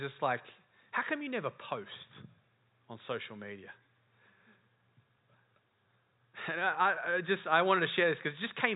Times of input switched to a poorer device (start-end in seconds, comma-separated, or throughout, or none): none